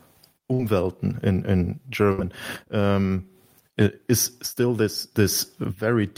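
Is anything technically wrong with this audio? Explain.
Yes. The speech has two bursts of packet loss and one short concealed packet loss.

The bursts of packet loss come at 0.53 to 0.60 s and 2.12 to 2.19 s. A run of packets was lost or arrived too late, so the receiver extended the last sound for about 55 ms and then 62 ms, fading it as it went. When the speech resumes, about 50 ms and 60 ms have been skipped. Each gap is a held, decaying buzz or hiss followed by a jump forward, not just a smear.

The short concealed packet loss, at 5.02 s, is much smaller. Only about 10 ms failed to arrive, and the decoder patched it with roughly 4 ms of extrapolated sound before blending back. It is heard as a brief smear or wobble, and that short duration is what sets it apart from the bursts.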